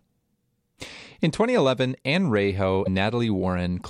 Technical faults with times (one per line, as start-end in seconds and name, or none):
2.81-2.88 damaged data in a compressed stream